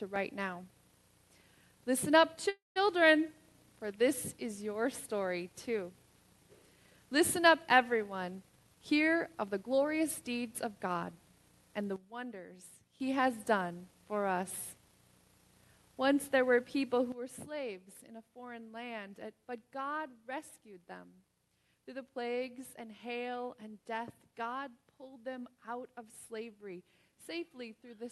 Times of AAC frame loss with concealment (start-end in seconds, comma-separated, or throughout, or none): none